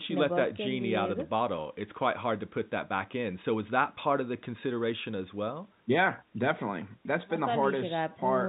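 Speech, with no technical faults to point out.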